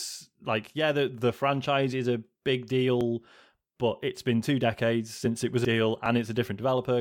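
At 3.01 s and again at 5.25 s, the speech jumps slightly ahead with no gap. A few milliseconds of sound are missing. This is likely a dropped buffer (overrun), with the samples overwritten before they were read. From 5.65 to 5.68 s, damaged data in the compressed stream causes a brief disruption. The decoder misread corrupted frames, lost sync and searched for the next header. At 6.06 s, the same jump recurs.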